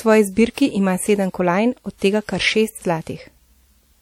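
Throughout the speech, a ringing, washy quality clings to the voice, with a hiss that swells and fades with the voice. This is most likely WMA compression, with damage that fits a low bitrate near 48 kbps. Long transform blocks smear quantisation noise tens of milliseconds around each onset, and weak components are discarded. A spectrogram would show pre-echo haze before consonants and holes speckling the quieter harmonics, although energy still reaches about 20 kHz.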